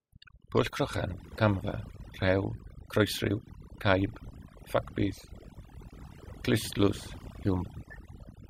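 A speech recording carries overdone noise removal from start to finish: an over-aggressive noise reducer has pulled the background down, broken up into twinkling specks, and taken quiet parts of the voice with it. On a spectrogram, the gaps show scattered isolated time-frequency dots and the voice has ragged, eaten-away edges.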